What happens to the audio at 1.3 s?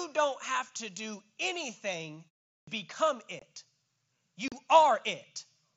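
Nothing goes wrong at 1.3 s: the audio is intact there, carried through the mSBC Bluetooth headset codec with its usual band limit at 8 kHz and light graininess.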